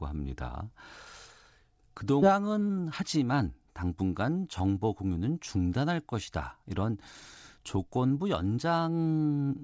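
At 2.22 s the playback skips ahead: roughly a second of speech is dropped, apparently discarded while later audio was already queued, and the two sides are butted together with no fill. The sound jumps abruptly forward, with material simply missing across the join.

From 2.32 to 4.85 s a jitter buffer speed-up follows. The receiver trims short pitch-period segments repeatedly to work off excess buffered delay, about a fifth of a second in total. The speech runs at 108 percent speed at unchanged pitch, sounding slightly hurried, over band-limited G.722 audio that stops at 8 kHz.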